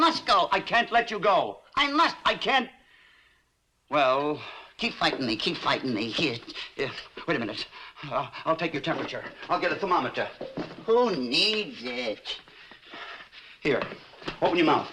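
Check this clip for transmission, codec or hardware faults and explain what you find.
Nothing in the clip points to a transmission, codec or hardware fault. There is no event anywhere in the audio that needs explaining.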